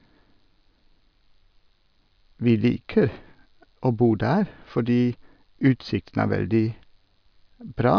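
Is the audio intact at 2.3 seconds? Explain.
Yes, the speech at 2.3 seconds plays through intact, with no audible fault at that moment.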